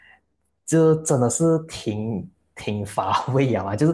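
Nothing technically wrong turns up anywhere in this short bit of speech.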